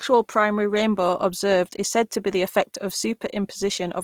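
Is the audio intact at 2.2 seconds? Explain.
No. At 2.2 seconds the speech carries Opus compression damage, and it runs through the whole clip rather than starting or stopping there. The likely cause is Opus in its CELT music mode at a low rate, with a grain that fits roughly 24 kbps. The bandwidth stays full, with content reaching about 20.4 kHz. The encoder keeps each band's energy but fills bit-starved bands with folded or noise content, so the speech sounds plainly rough, grainy and noisy.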